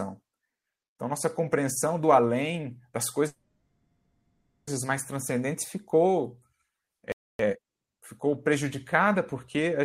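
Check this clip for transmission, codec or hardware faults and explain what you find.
Three faults stand out, all in the timing of the speech.

A call audio freeze runs from 3.27 to 4.69 s. The last sound is stretched into a fading buzz for about 1.4 s. The final 0.36 s is silent. Delayed packets likely left the jitter buffer empty. The speech then resumes where it stopped, with nothing lost but 1.4 s added.

A playback stall follows at 7.12 s. The speech cuts off mid-flow and stays silent for about 0.27 s, until 7.39 s. The likely cause is a player that ran out of data or had its thread blocked.

Time-compressed catch-up comes right after, from 7.39 to 7.65 s. The player drops small pieces and cross-fades the rest to clear its backlog. The speech runs at twice normal speed, at normal pitch.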